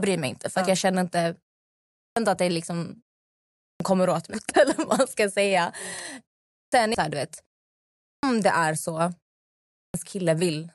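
Clipped start after a pause at 1.96, 3.57 (before "kommer åt"), 6.5, 8.03 (between "här du vet" and "det är") and 9.72 s: after each pause, the output device wakes slowly and swallows roughly 0.2 to 0.23 s, so speech bursts in missing its opening sounds.

Damaged data in a compressed stream at 6.95 s, just before "här du vet": corrupted frames throw the decoder out of sync, producing a brief blip as it hunts for the next header.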